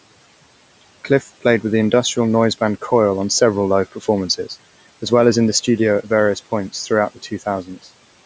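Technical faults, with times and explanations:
1.04–1.45 s, 3.91–4.07 s, 7.15–7.43 s, 7.63–7.87 s: speech cut by the noise suppressor. The suppressor treats brief speech fragments as background and pulls them down by about 13 to 16 dB, so the sound dips and seems swallowed.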